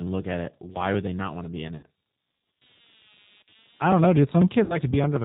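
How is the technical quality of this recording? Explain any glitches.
The recording has clear technical problems. A faint computer buzz runs throughout, the whole clip is plainly coloured by a low-rate speech codec, and the speech breaks up twice.

Computer activity noise is present from start to finish. It is a buzzing, chirping texture with a pulse rate of around 200 Hz. It sits well below the speech, at roughly 35 dB down. The computer's changing load disturbs the ground shared with the audio circuit. That is why the buzz tracks the machine's activity rather than the speech.

The G.729 codec damage is plainly audible throughout. Nothing above 4 kHz survives, so the speech sounds narrow and muffled. It also has a rough, slightly synthetic edge. The codec rebuilds speech from a vocal tract filter, a pitch predictor and a few pulses per frame. It does not carry the actual waveform. This fits an 8 kbit/s G.729 stream. 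The background buzz may also warble, because the codec models it as speech.

VoIP packet loss concealed by the speech codec occurs twice. The first break is from 1.77 to 1.85 s, and the second is from 4.64 to 4.79 s. Each covers about 60 ms of missing audio, which suggests two lost packets each time. The decoder fills each gap by repeating its last pitch and filter with falling gain. The speech smears into a fading buzzy tone or coloured noise. It stays weak briefly after packets resume.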